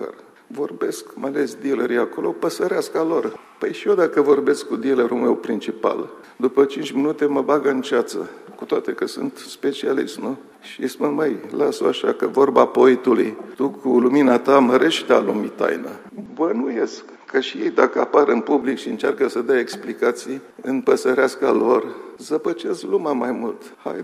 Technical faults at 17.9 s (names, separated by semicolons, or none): input switched to a poorer device